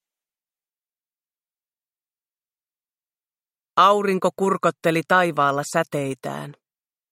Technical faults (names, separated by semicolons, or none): none